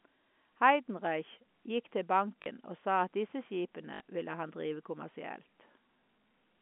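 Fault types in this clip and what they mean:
Packet loss with last packet repeated: packets dropped out and the receiver just replayed the last one to fill the gap, so there's a short robotic stutter and a buzz, about 40 ms at 2.42 s just before "og sa at disse" and about 60 ms at 3.94 s right before "ville han drive", which fits 20 ms packets, all over a narrow telephone-band line.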